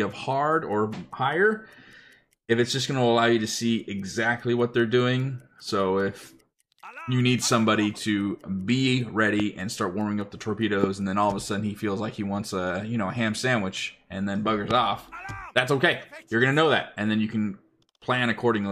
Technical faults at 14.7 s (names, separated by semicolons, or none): loud pop